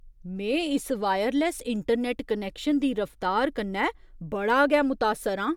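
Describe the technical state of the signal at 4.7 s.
At 4.7 s the speech signal is intact, with no technical fault audible at that moment.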